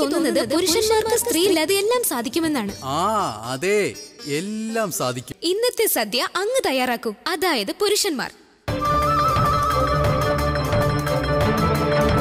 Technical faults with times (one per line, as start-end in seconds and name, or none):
0.00-1.54 doubled audio track